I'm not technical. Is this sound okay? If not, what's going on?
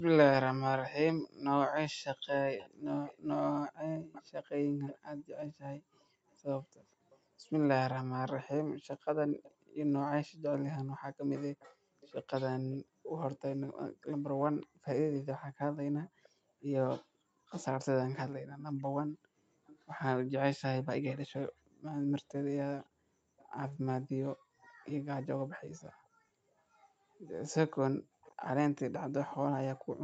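No, there are two problems.

The main one is an echo leak. From 2.58 to 13.39 s, briefly at 16.02 to 16.29 s, from 18.41 to 19.76 s, and again from 22.8 to 29.34 s, you can hear a faint second copy of the speech trailing behind the original by about half a second (roughly 480 to 570 ms). It's likely that someone on the call had their speaker on, and their echo canceller didn't fully scrub their microphone, so the sound bounced back.

The second is background gated by the echo canceller. At 14.66 to 14.84 s, the room sound suddenly drops to near silence for about a fifth of a second, then comes back. That's the echo canceller clamping the microphone down hard while it thought the loudspeaker was playing, then letting go.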